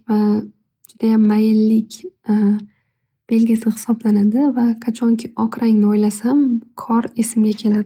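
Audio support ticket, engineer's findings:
Lost packet rebuilt from error correction at 1.23–1.25 s and 3.55–3.61 s. Brief rough, noisy patches with no dropout. Decoder played low-bitrate redundant copies (Opus in-band FEC), fitting one and then two lost 20 ms packets. Unlike plain concealment, there is no gap and no smeared repetition.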